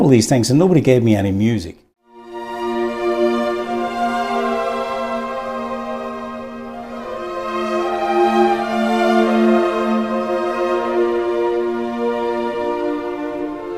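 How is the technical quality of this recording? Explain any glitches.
Nothing stood out on listening; I heard no glitches anywhere in the recording.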